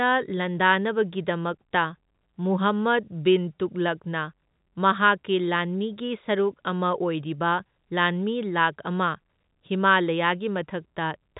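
Nothing here needs fixing: it's a speech recording carried over ordinary G.711 telephone coding, A-law by the sound of it, so the top end stops at about 3.8 kHz as a phone line should, and there's no fault to point to anywhere in it.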